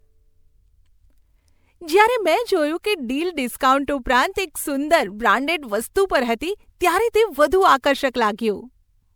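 Generation loss runs through the whole of this speech recording: the sound is swirly, smeared and hollow, and consonant attacks are blurred. Content stops at about 20.9 kHz, consistent with MP3 at a bitrate around 128 kbit/s. The likely cause is repeated decoding and re-encoding, roughly three passes, each quantising on a shifted frame grid, so noise and spectral holes accumulate beyond what a single encode at that bitrate would leave.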